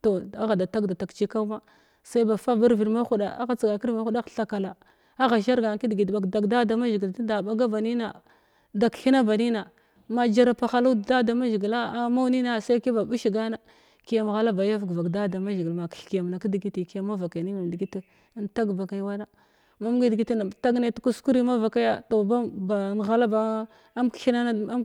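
A speech recording, and nothing technically wrong can be heard in it.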